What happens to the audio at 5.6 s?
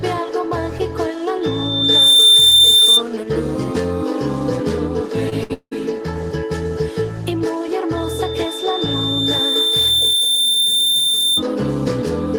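At 5.6 s the audio is inside a long network dropout that runs from 5.53 to 5.73 s. It is most likely a stretch where no audio reached the receiver. The player extends the last sound as a fading buzz or hiss, and the final 60 ms or so go fully silent before the audio returns about 180 ms further along. On a waveform this shows as a shrinking, repetitive tail ending in a flat line. A spectrogram shows smeared, stretched horizontal bands that fade to a blank column, then an abrupt restart.

Just before it, from 5.43 to 5.51 s, a burst of packet loss does the same on a smaller scale. About 60 ms of audio is missing, and the receiver covers the gap by continuing and softening the preceding sound, giving a brief held buzz or hiss before the audio jumps ahead. The waveform has a short run of near-identical repeated cycles that taper off. The spectrogram shows a brief patch of frozen, steady bands with no onsets, ending in a sudden change where playback resumes.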